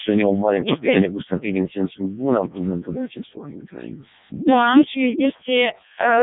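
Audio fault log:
Throughout: Codec 2 vocoder. Heavy damage: the speech is rebuilt as summed sine waves from only pitch, voicing and a coarse envelope, so it sounds robotic and buzzy, which fits the 0.7 kbit/s mode. Spectrogram: rigid harmonic stripes, nothing above 3.8 kHz.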